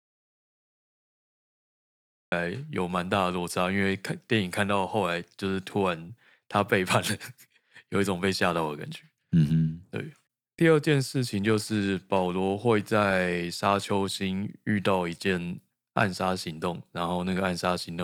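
The speech opens in an audio dropout to silence. From the very start until 2.32 s there is nothing at all. The gap is silent, with no room tone or hiss underneath. The dropout is already under way when the clip begins, so the speech enters abruptly at 2.32 s. The input was likely lost for those seconds, through a disconnected device, a failed link or a mute, while recording carried on. Anything said before 2.32 s is gone.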